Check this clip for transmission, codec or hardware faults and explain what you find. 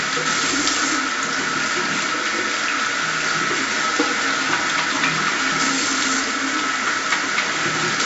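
One codec fault runs through the whole clip. 4-bit ADPCM compression, throughout: each sample is coded as a coarse 4-bit step from a prediction, so broadband error noise tracks the level as gritty hiss, with smeared attacks. Nothing sounds above 7.7 kHz, which fits a 16 kHz, 64 kbps stream.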